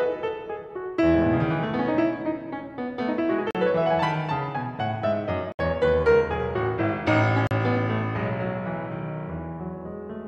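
The music cuts briefly to silence at 3.51 to 3.55 s, 5.52 to 5.59 s and 7.47 to 7.51 s. These are Bluetooth stalls, likely from interference delaying packets until the headphones' buffer ran empty.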